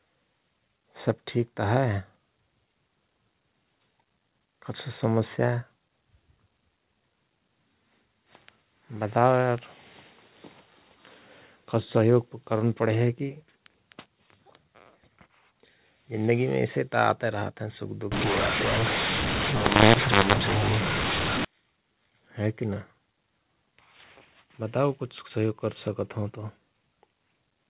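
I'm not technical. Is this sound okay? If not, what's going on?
No. From 18.12 to 21.45 s, just after "रहत हयं सुख दुख", the speech turns harsh and gritty and the pauses fill with hiss. This is a mu-law and A-law mix-up: phone audio packed one way was unpacked the other, scrambling loudness. Unlike ordinary overload distortion, even the silent gaps turn noisy.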